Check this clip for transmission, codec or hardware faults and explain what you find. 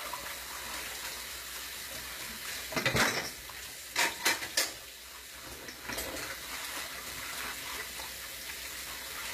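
There is one codec fault, and it runs through the whole clip. The treble sounds bright but false, with a gritty, metallic edge. Its harmonics do not line up with the lower band. Nothing is present above about 14.9 kHz. This is likely HE-AAC compression at a low bitrate, around 20 kbps. The codec keeps only the lower spectrum. It rebuilds the top by copying lower bands upward under a coarse envelope. The damage is plainly audible.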